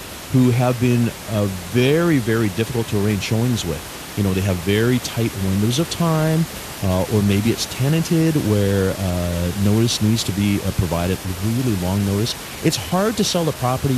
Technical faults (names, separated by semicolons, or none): none